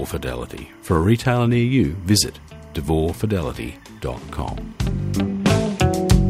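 Linear timecode running at 25 frames per second has leaked from a neighbouring track or cable into the audio path, giving timecode bleed that lasts from start to finish. The code's square wave flips between two pitches, around 1 kHz and 2 kHz, as its bits change, so a continuous chirping warble sits behind the sound. It stays well down, roughly 35 dB beneath the main signal.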